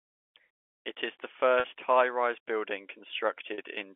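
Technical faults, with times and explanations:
1.60–1.64 s (just after "is the") and 3.54–3.58 s, packet loss with pitch repetition: two 40 ms gaps, consistent with two 20 ms packets each, are bridged by a repeated pitch period. They sound like a briefly held, buzzy note rather than a silent dropout or click, within the 300–3400 Hz telephone band.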